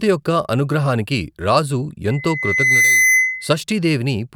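From 2.09 s to 3.56 s a loudspeaker feedback squeal rises at 2 kHz, swelling over most of a second to sit a little above the speech. A microphone is re-amplifying its own loudspeaker. The tone grows on its own, unlike a steady, fixed-level interference whine.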